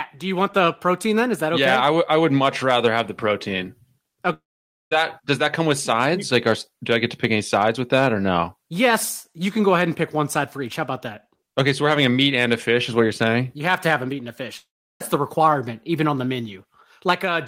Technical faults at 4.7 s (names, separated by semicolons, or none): long network dropout